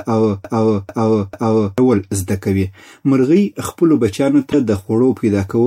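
From the very start until 1.78 s, a broken-record loop is already under way: a 0.44 s fragment of speech repeats exactly, three times back to back, before "زده کوي مرغۍ خپلو". The likely cause is a stalled stream resending its last buffered piece, so the intended audio is lost. On a waveform, identical blocks tile at a fixed spacing.

Just after "کوي مرغۍ خپلو بچیانو", from 4.50 to 4.54 s, damaged data in a compressed stream produces a brief glitch as the decoder misreads frames and resynchronises. A spectrogram shows a short broadband smear or gap that breaks the surrounding harmonic pattern.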